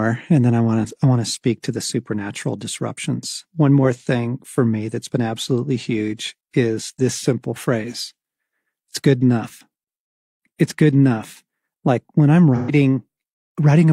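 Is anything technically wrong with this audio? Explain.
Yes. From 12.55 to 12.71 s near the end of this speech, there is AAC frame loss with concealment. The decoder rebuilds the missing stretch, which fits about three lost frames, from the last good spectrum. The result is a smeared, phasey patch rather than the hard silent gap of a plain dropout.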